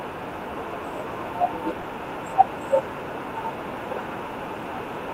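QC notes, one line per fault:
1.81 s, sound dropped by the voice detector: a 20 ms slice of the speech vanishes and is briefly replaced by a steady noise bed. The likely cause is a voice detector, consistent with Opus DTX, misjudging that instant as background and pausing transmission while comfort noise filled in.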